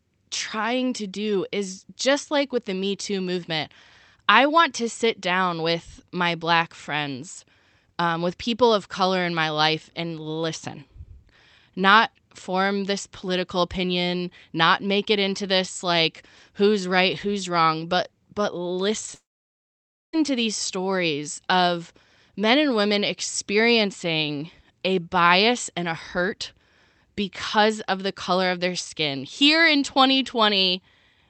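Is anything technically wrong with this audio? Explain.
Yes. Long network dropout from 19.14 to 20.14 s: audio likely stopped arriving, so the receiver briefly stretches the last speech into a fading buzz, then about 0.9 s of silence, and the lost speech never returns.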